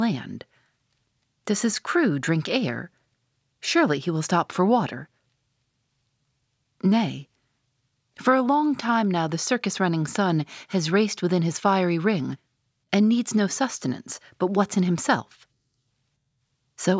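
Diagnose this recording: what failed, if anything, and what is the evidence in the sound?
Nothing in this speech recording points to a failure at any stage of the chain, from the wiring and converter through to storage and playback.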